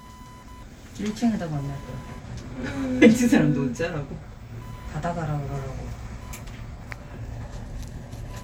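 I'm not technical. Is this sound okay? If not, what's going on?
No. A faint, high-pitched buzz runs through the whole clip. That's computer activity noise: the computer's own electrical workload leaking into the audio. Unlike mains hum, it's a thin, rapid buzz, around a thousand pulses a second.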